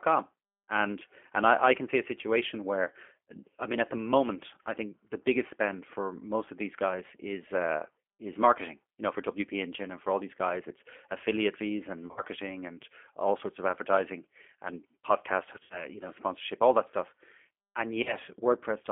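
The G.729 codec runs throughout, confining speech to about 250 Hz to 3.4 kHz with a rough, synthetic edge. A spectrogram shows an empty band above 3.4 kHz. VoIP packet loss concealed by the speech codec occurs at 12.07–12.22 s, 15.56–15.90 s and 18.03–18.16 s. The decoder stretches its last sound into a fading buzzy tone or coloured noise, which shows as a smeared, repeating spectrum and a sagging waveform envelope.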